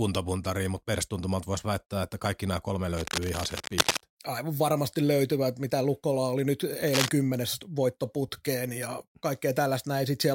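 From 2.97 to 4.01 s, after "että kaikki nämä kolme", and 6.88 to 7.11 s, before "kymmenes voittoputkeen ja", cable scratch noise adds uneven rustling near speech level, likely from a worn connector shifting its contact.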